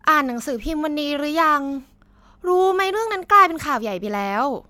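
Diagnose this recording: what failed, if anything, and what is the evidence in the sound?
Nothing failed in this recording, and there is no evidence in the sound of any fault.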